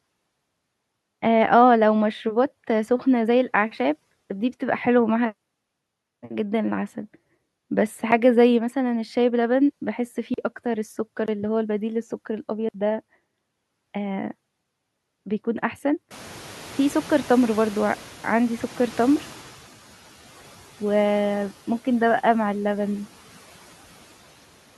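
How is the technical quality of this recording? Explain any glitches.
The recording has two kinds of fault: four brief dropouts to digital silence between 8 and 13 seconds, and a stretch near the end where noise reduction lags behind a jump in background noise.

Blocks of digital silence occur at 8.11 s (about 7 ms), 10.34 to 10.38 s (40 ms), 11.26 to 11.28 s (20 ms) and 12.69 to 12.74 s (53 ms). In each, a run of samples was zeroed, likely because the output buffer wasn't filled in time. The signal drops abruptly to zero and returns without a fade. The shortest is heard as a tick, and the longer ones as small holes in the speech.

Noise suppressor catching up happens from 16.1 to 19.59 s. Around 16 s the room noise rises by roughly 24 dB, ending up about 22 dB below the speech. The suppressor's noise estimate trails that jump, so the new noise initially passes through with little reduction. 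Over about 3.5 s the estimate adapts and the noise settles by about 7 dB, which is audible as a gradual sinking of the background noise.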